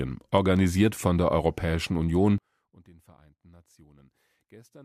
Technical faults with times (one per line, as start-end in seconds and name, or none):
2.38-4.85 one channel inverted